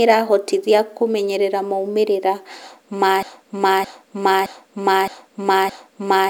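A stalled player or stream most likely kept resending the last fragment it held, producing a broken-record loop from 3.23 s to the end of the speech: a 0.62 s piece repeats exactly five times, back to back, and whatever should have followed is lost.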